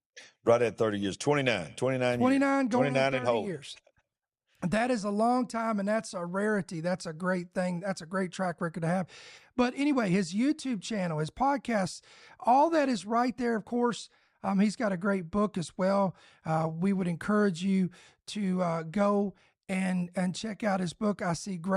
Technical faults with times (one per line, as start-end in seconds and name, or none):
none